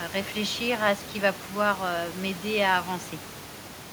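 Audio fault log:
No fault is heard in this speech clip.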